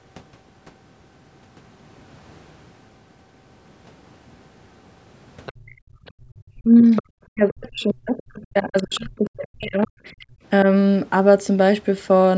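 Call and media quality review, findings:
Other side's voice leaking through: second voice at 5.46–5.75, 6.06–6.11, 6.96–7.03, 8.17–8.37 and 8.77–9.30 s, roughly 15 to 35 dB under the talker. Likely incomplete echo cancellation of the loudspeaker signal.

Background gated by the echo canceller: room sound ducks about 34 dB over 5.53–6.26 s, roughly half a second in total, and about 28 dB at 10.26–10.44 s. Suppressor clamping the microphone during far-end playback.

Speech suppressed in double talk: talker's voice dips and breaks up from 6.54 to 9.98 s, down roughly 40 dB at worst. Likely the canceller confusing near-end speech with echo while both sides talk.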